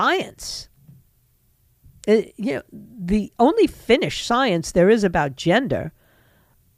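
No technical faults can be heard anywhere in the recording.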